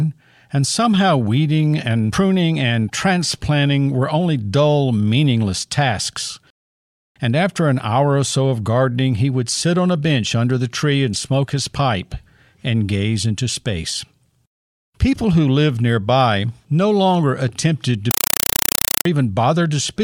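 From 18.11 to 19.05 s the speech gives way to very loud, chattering static, a 4 ms burst of noise repeating 31.25 times a second with silence between. This is a compressed stream played as audio: an encoded Dolby Digital bitstream, consistent with 192 kbps AC-3, was passed through undecoded.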